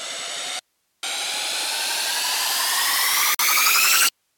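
The audio suffers an audio dropout to a faint residue from 0.59 to 1.03 s. For about 0.44 s the signal vanishes abruptly, leaving only hiss roughly 50 dB down. A live input behind a broken feed is the likely cause; unlike a fade or pause, it cuts sharply both ways. At 3.35 to 3.39 s there is a gap at a join of encoded pieces, a 47 ms gap with smeared edges. Separately encoded segments were joined with their start delay and end padding still in. Unlike the dropout, the gap is short, and the sound resumes exactly where it stopped.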